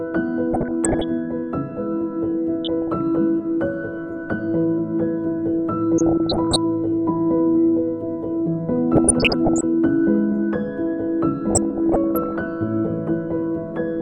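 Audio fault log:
Throughout: MP2 compression, dull and gurgling, with upper sub-bands flickering off on a spectrogram; the sound points to a low bitrate, around 80 kbps, the likely cause.
0.51–1.08 s, 2.65–2.97 s, 5.98–6.56 s, 8.95–9.63 s, 11.50–12.41 s: DAB burbling, short blips of noise as bit errors corrupt samples in single sub-bands, seen as scattered bright blocks.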